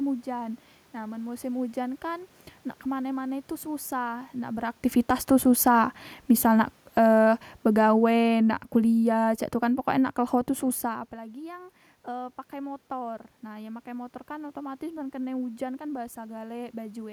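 A speech recording with one technical fault: automatic gain falling from 5.44 s to 10.9 s, where the level is pulled down by about 8 dB as the gain control reacts to input it judged too loud or too noisy. What separates this from a talker moving away, as happens near 4.5 s and again near 10.5 s, is that the room noise sinks along with the voice, because the whole signal is being turned down rather than just the source.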